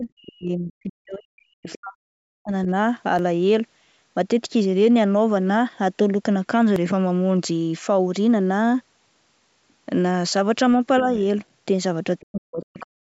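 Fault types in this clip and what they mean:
Speech suppressed in double talk: the echo canceller likely mistook overlapping talk for echo and turned the talker down, by up to about 40 dB early and at the end.
Other side's voice leaking through: uncancelled loudspeaker sound likely reached the microphone, leaving a brief scrap of a second voice, about 20 dB below the talker, near 1.7 s.
Dropped buffer (overrun): samples were likely overwritten before being collected, so about 10 ms vanishes and the sound jumps at 3.19, 6.76 and 7.83 s.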